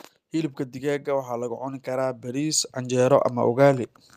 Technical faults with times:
0.32-3.04 automatic gain rising

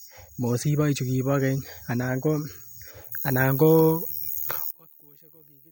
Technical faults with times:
4.71-5.71 one channel inverted

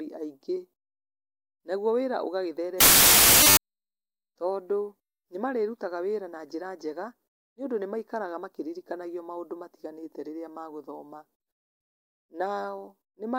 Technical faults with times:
2.80-3.57 samples built from the wrong bytes

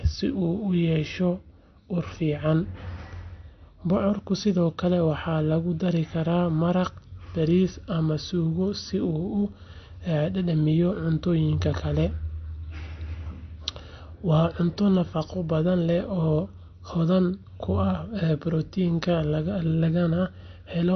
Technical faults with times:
0.00-20.95 MP3 compression

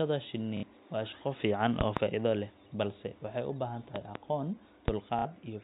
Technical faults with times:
0.57-0.63 packet loss with last packet repeated
1.81-2.00 loud pop
3.96-4.19 loud pop
4.88-4.92 loud pop
5.19-5.25 packet loss with last packet repeated

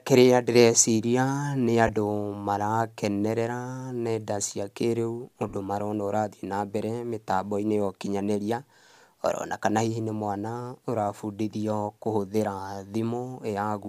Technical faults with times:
1.87-1.89 lost LE Audio frames
5.49-5.54 lost LE Audio frames

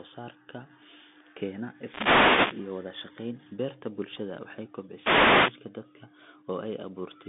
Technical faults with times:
0.00-7.29 Bluetooth CVSD headset codec
1.69-2.76 wireless microphone noise hit
4.92-5.61 wireless microphone noise hit

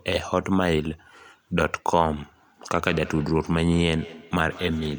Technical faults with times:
2.77-4.99 feedback echo between two devices

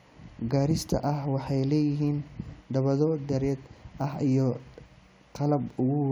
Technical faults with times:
none

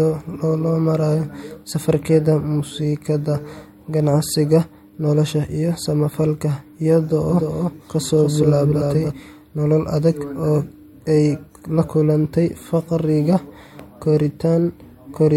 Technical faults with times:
7.30-9.12 doubled audio track

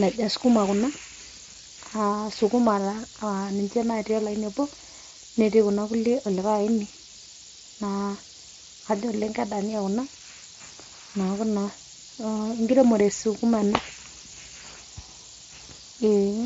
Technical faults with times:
0.00-16.46 low bit depth with noise shaping

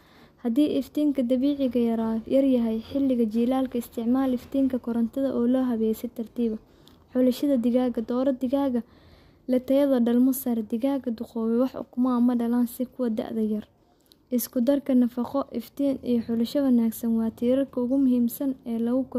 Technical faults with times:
none

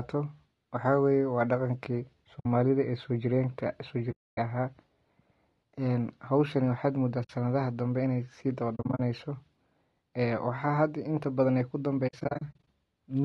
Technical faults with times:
0.00-13.24 low-delay AAC compression
2.39-2.46 AAC frame loss with muting
4.11-4.38 AAC frame loss with muting
7.23-7.30 AAC frame loss with muting
8.75-9.00 AAC frame loss with muting
12.07-12.67 AAC frame loss with muting

